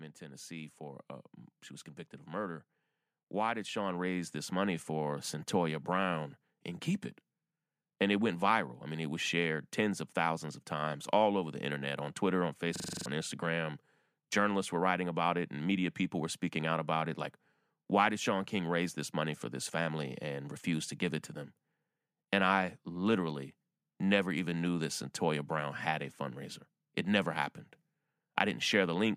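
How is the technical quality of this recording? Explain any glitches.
The recording has two technical problems: a slow, steady rise in level across almost the whole speech clip, and one brief stretch where the audio is stuck repeating itself.

From 0.19 s to 27.1 s the voice and the background noise grow louder together, gaining about 13 dB in total. This is automatic gain rising. The gain control judged the input too quiet and kept raising its gain gradually. Because it amplifies everything it receives, the background swells along with the voice.

From 12.76 s to 13.06 s a single 42.67 ms fragment repeats seven times in a row, a rapid cycling at 23.4 Hz, and roughly 300 ms of the real audio is missing. This is a system hang loop. The computer or its driver froze while the sound hardware kept replaying the same ring buffer. The loop length fits a 2048-sample buffer. Normal audio resumes once the system recovers.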